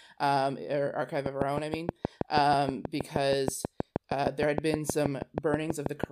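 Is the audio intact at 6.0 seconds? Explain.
No. At 6.0 s the clip is inside a train of clicks running from 1.26 to 6.05 s. Sharp, similar pulses tick about 6.3 times per second at a regular pace, roughly 30 in all. They sit well above the speech and persist through pauses, likely from electrical interference or a faulty connection.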